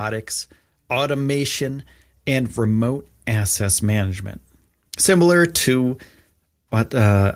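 From 0.88 s to 4.28 s, the speech and the background behind it swell together, ending up about 7 dB louder. This is automatic gain rising: the gain control judged the input too quiet and raised its level slowly over those three or so seconds.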